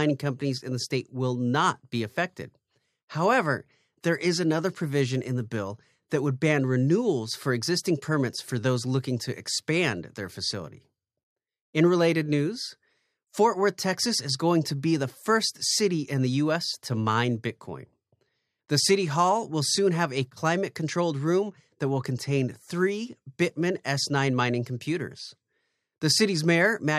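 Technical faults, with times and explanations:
Nothing technical gets in the way here, as the speech runs along without any faults to point to.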